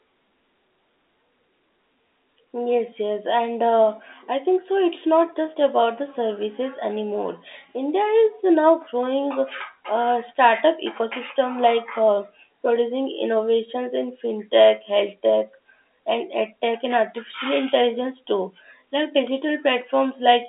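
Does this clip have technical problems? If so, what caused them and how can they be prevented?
No, there are no technical problems to report in this speech clip. It carries G.711 telephone coding, heard as a narrow line band running from about 250 Hz to 3.7 kHz, with nothing audible above roughly 3.8 kHz.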